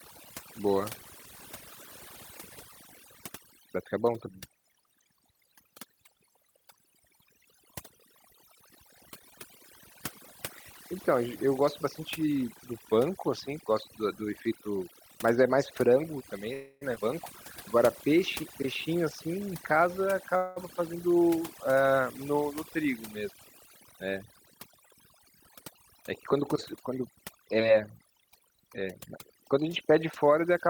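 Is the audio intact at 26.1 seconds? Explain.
No. At 26.1 seconds, as throughout the clip, the USB bus's 1 ms frame current leaks into the audio path, adding a fixed USB whine on 1 kHz harmonics, strongest near 11 kHz and roughly 40 dB below the speech. An overdone noise removal setting also cuts frequency bands near its noise estimate, leaving a lowered, twinkling background and taking quiet parts of the speech with it.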